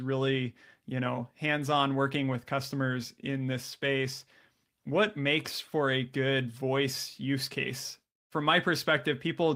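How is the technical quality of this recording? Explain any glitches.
No glitches turn up anywhere in this recording, and the signal carries through without any dropout, distortion or other technical disruption.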